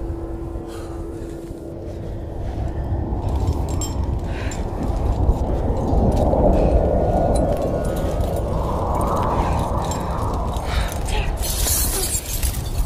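Nothing in the sound stood out as a problem on listening.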